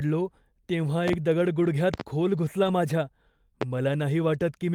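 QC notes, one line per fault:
1.08–1.17 s, 1.94–2.03 s and 3.62–3.65 s, loud pop: sharp clicks, a close pair in each of the first two spots and a single one in the last, peaking about 15 dB above the speech, which continues underneath. The likely cause is a voltage step from a plug, switch, static or driver glitch.
1.63–1.65 s and 2.63–2.69 s, lost packet rebuilt from error correction: brief rough, noisier patches with no gap, 20 ms and then 40 ms long, which fits one lost packet and then two. The decoder filled each hole with the low-bitrate copy carried in the following packet.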